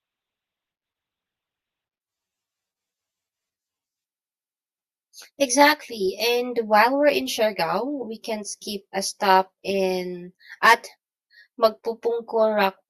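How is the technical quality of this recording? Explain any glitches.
The recording has two technical faults: a hollow, phasey coloration for the whole length of the speech, and a dull, degraded opening that cleans up abruptly.

From 0.0 to 2.0 s the audio comes from an adaptive stream starting at a low bitrate. Treble is missing and codec artefacts are stronger, which fits a very low-bitrate Opus start before the player switched to a much better stream. Quality jumps with no gap, unlike a dropout or a reconnection.

Throughout, channel delay (comb filtering) is audible. One channel lags by around 10 ms, and the two are summed to mono, so cancellations fall near 50 Hz and then at regular intervals above it. The notches stay fixed rather than sweeping, which separates this from a flanger or phaser effect.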